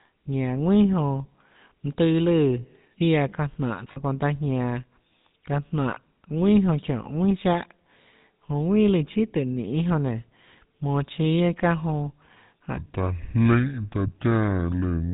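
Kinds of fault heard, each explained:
GSM full-rate codec: the speech went through the 13 kbps GSM vocoder, cutting everything above 4 kHz and leaving a plainly audible buzzy, gravelly roughness throughout.
Lost GSM frames: around 3.92 s a short gap, about 40 ms, was filled by repeating the last good frame, giving a brief rough, metallic ring.
Section at the wrong speed: from 12.77 s to the end the audio runs at 0.634 times its speed, likely a clock mismatch, so speech drops about seven semitones, deep and slow.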